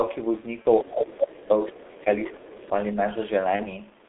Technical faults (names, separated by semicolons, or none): G.723.1 codec; VoIP packet loss concealed by the speech codec; speech suppressed in double talk; other side's voice leaking through